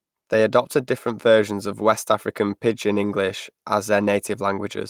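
No technical faults occur at any point in the recording.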